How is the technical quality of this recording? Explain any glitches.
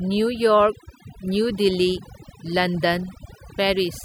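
The recording suffers from overdone noise removal throughout. A noise reduction stage set far too strong pushes individual frequency bands down or off whenever they sit near its noise estimate. The background drops and breaks up into twinkling specks, and the quieter parts of the speech get stripped away too.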